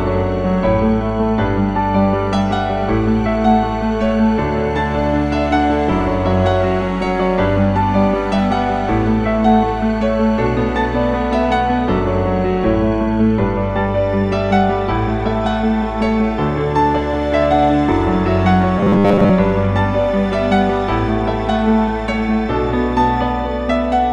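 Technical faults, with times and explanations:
18.79 to 19.31 s: robotic sound from repeated short buffers. The sound becomes a stiff, metallic buzz at 100 Hz. New audio likely arrived too slowly. A stretch of about 10 ms was replayed in its place, fixing that pitch. Most of this span is repeats.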